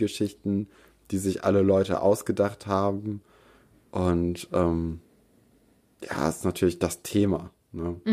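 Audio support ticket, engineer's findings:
No faults found on listening; ticket closed without action.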